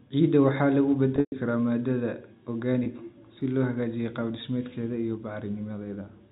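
From 1.16 to 1.32 s, packet loss with pitch repetition: about 140 ms of audio goes missing, mostly in one 120 ms run. The receiver loops the last pitch period, giving a held, buzzy tone that fades to silence before a cross-fade back. Spectrograms show frozen, flat harmonics dimming into a gap, all below the 4 kHz G.711 ceiling.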